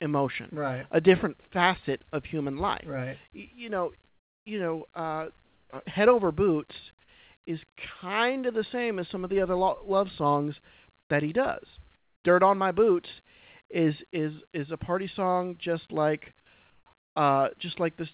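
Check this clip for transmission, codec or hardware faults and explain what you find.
The clip has one recurring fault, comfort noise in place of the background, in six short pauses in the speech. The band stops at 4 kHz, which points to a G.711 call path.

Comfort noise in place of the background appears at 4.08–4.46 s, 5.44–5.70 s, 11.00–11.10 s, 11.96–12.24 s, 16.70–16.86 s and 16.98–17.16 s, each lasting 100 to 380 ms. The likely cause is discontinuous transmission: when the sender's voice detector decided no speech was present, it stopped sending audio, and the receiver filled the gap with synthetic noise. In each gap the real background gives way to a flat, featureless hiss, about 4 to 12 dB quieter, before the original background returns with the next speech.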